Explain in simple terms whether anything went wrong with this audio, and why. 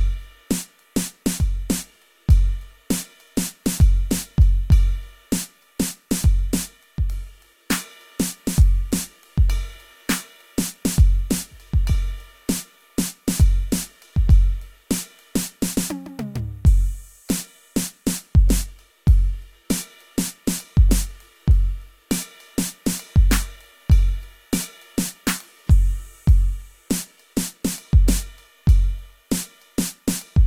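Nothing went wrong with this music: the signal stays steady and intact all the way through, with nothing faulty to be heard at any point.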